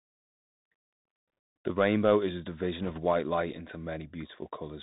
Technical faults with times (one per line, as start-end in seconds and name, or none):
0.00-4.83 Bluetooth CVSD headset codec
2.83-3.00 bit errors on a Bluetooth voice link